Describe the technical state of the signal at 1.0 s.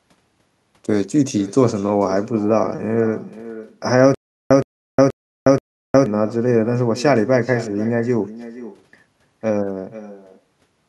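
At 1.0 s the speech is shadowed by a quieter, thinner copy of itself arriving roughly half a second behind, sitting about 16 dB below the direct sound. This is echo with no canceller, and it runs through the entire clip. The far end is playing the call over a loudspeaker, its microphone captures that playback, and nothing subtracts it, so the talker's own voice returns after the network round trip.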